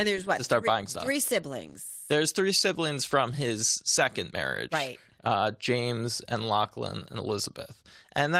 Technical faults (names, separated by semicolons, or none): none